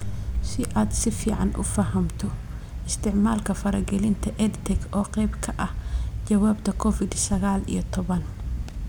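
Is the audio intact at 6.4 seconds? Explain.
Yes, at 6.4 seconds the speech plays through intact, with no dropout, click, distortion or other fault to be heard at that moment.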